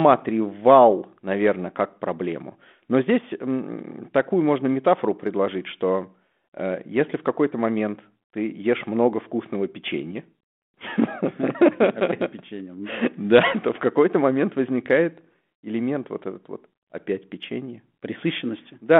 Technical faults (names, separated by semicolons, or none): none